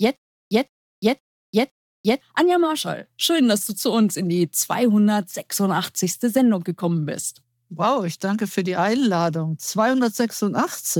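Right from the start until about 2.21 s there's a stutter with silent gaps. A short burst of about 164 ms keeps coming back roughly every 512 ms, with around 347 ms of dead digital silence between repeats. It's likely a stalled player replaying its last fragment before running dry.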